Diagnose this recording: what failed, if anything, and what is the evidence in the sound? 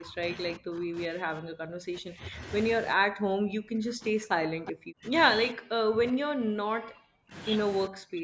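Speech suppressed in double talk at 0.00–0.22, 0.57–2.39, 2.96–5.12, 5.51–7.35 and 7.88–8.24 s, in call processing. The speech dips by up to about 40 dB (about 25 dB in the first burst), likely because the echo canceller ducked it while the far side was also talking.

Echo leak at 4.67–4.71 s, also in call processing. A brief scrap of the voice returns 356 ms late, about 15 dB below the direct speech. This is likely a loudspeaker echo that an echo canceller failed to remove fully and sent back.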